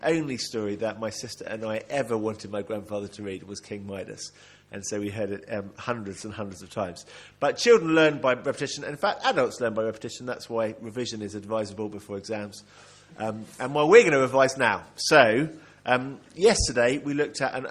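Mains buzz runs through the whole clip, a steady, raspy rasp sitting about 35 dB under the main sound. It comes from a 50 Hz supply. Something like a dimmer, a rectifier or an unshielded cable lets sharp switching spikes in twice per mains cycle. On a spectrogram this shows as a stack of evenly spaced horizontal lines at multiples of 50 Hz, climbing into the kilohertz range. In a zoomed waveform, small spikes repeat every 10 ms.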